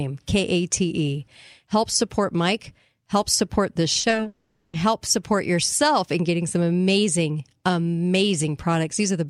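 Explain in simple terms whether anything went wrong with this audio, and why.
Around 3.99 s the speech starts breaking up. Between 3.99 and 4.27 s there are four quick gaps, the longest about 40 ms. Each hole gets patched by stretching the last bit of sound, so roughly a third of that short stretch is filler rather than real speech. That choppy, patched-up sound is repeated packet loss (robotic sound): bits of the audio stream kept going missing one after another.

Right after that, from 4.27 to 4.75 s, the sound smears into a drawn-out buzz that fades away, and the last tenth of a second or so is silence. Then the speech picks up again with a chunk missing. The likely cause is a long network dropout. Nothing arrived for nearly half a second, so the receiver padded the hole by dragging out the last sound until it gave up.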